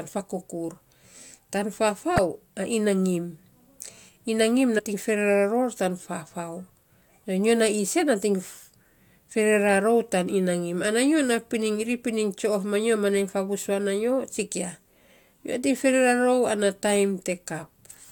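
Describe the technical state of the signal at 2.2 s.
A skip from 2.15 to 2.19 s, where the speech jumps forward by about 40 ms. These are compressed frames skipped: whole frames were missing or rejected by the decoder, so the audio jumps ahead at the join.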